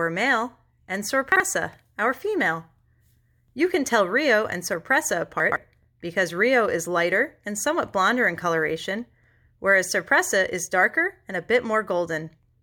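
Chunks out of order occur at 1.32 to 1.40 s and again at 5.40 to 5.56 s. In each case a 40 ms block of the speech plays late. In the first it trails the one block that should follow it. In the second it lands after three. No audio goes missing, but the sequence is scrambled. The three abrupt joins at each spot give a brief jumbled stutter.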